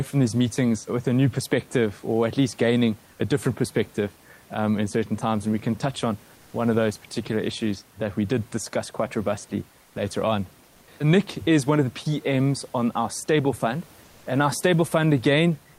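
Speech recording with comfort noise in place of the background in three short pauses: 9.81–9.95 s, 10.65–10.87 s and 14.03–14.25 s. The room noise gives way to a flat, featureless hiss about 2–3 dB quieter, likely from discontinuous transmission such as Opus DTX.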